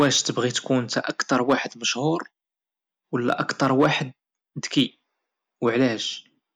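Speech, with hard clipping in five places: 0.0 to 0.30 s, 0.98 to 1.54 s and 3.29 to 3.86 s, each driven about 4 dB past the ceiling, then 4.78 to 4.81 s at about 2 dB and 5.67 to 5.85 s at about 1 dB. The signal overruns the level a stage can pass, so peaks are sliced flat. Those flat tops generate high harmonics, heard as harsh crackle on the loud syllables, strongest in the first three stretches.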